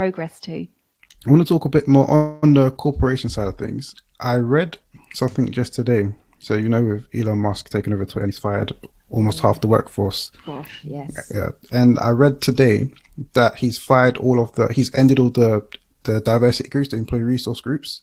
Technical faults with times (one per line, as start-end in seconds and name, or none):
2.15-2.44 call audio freeze
8.17-11.41 jitter buffer speed-up